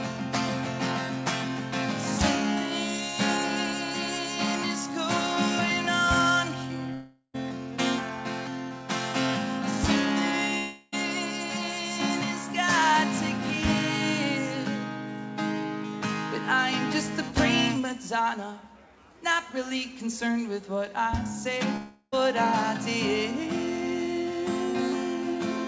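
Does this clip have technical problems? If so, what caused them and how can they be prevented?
Yes: a long network dropout is the likely cause at 6.94–7.36, 10.58–10.94 and 21.76–22.14 s. Each time, a fading buzz or hiss stands in for about 0.35–0.4 s of lost audio, longer than a brief packet-loss click. A steadier connection and a deeper jitter buffer prevent it.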